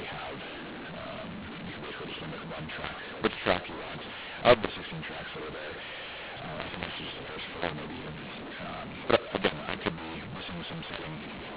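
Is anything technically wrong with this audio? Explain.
Yes. Throughout the clip, mu-law and A-law are mixed up: G.711 mu-law audio is decoded as A-law, scrambling levels so the speech sounds harsh and distorted, with pauses filled by noise.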